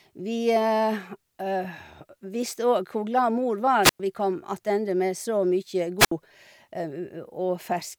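Wireless microphone squelch dropout occurs twice in this speech, first from 3.82 to 4.00 s and again from 5.99 to 6.12 s, just after "med så mye". Each time the FM radio link weakens, hiss swells briefly, then the receiver's squelch shuts the output, leaving a hole of near silence of about 105 ms in the first event and 67 ms in the second before the speech comes back.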